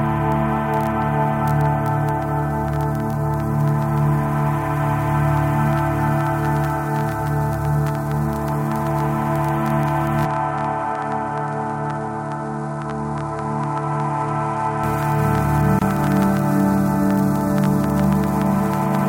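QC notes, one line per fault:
10.25–14.84 s, input switched to a poorer device: the sound turns duller and about 5 dB quieter with no break, nothing reaches above 10.5 kHz, and a new noise floor sits roughly 50 dB down. The likely cause is a capture path changing to a narrower-band microphone, returning to full bandwidth at 14.84 s.
15.79–15.82 s, gap at a join of encoded pieces: a 25 ms silence cuts into continuous sound with smeared edges, then the sound resumes where it stopped. Separately encoded segments were joined without trimming their start-up delay and end padding.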